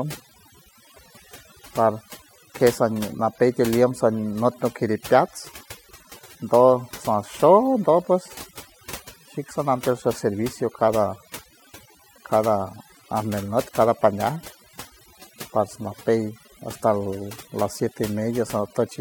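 Overdone noise removal runs through the whole speech clip. A noise reduction stage was pushed too hard, cutting individual frequency bands whenever they sat near its noise estimate. Quiet voice detail vanished with them. Pauses fall to near silence with twinkling specks.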